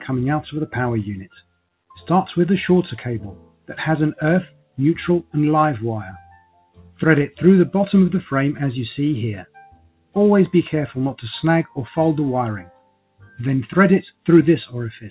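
Throughout, the level pumps and held sound thins by around 5 dB, because a noise suppressor applied to music or sounds treats steady material as noise. Sound cut by the noise suppressor sinks by about 15 to 19 dB at 1.41–1.6 s, 3.39–3.69 s, 4.5–4.78 s, 6.21–6.99 s, 9.45–10.16 s and 12.64–13.39 s, where sustained parts are pushed down. Nothing above 4 kHz comes through the call path, which fits G.711 mu-law at 64 kbps.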